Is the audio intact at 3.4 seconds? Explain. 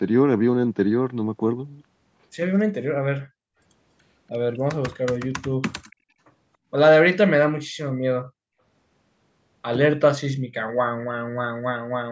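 No. From 3.28 to 3.58 s the background is gated by the echo canceller: while the far-end loudspeaker played, it pulled the microphone down by about 37 dB, so the room sound ducks, then recovers as the canceller releases.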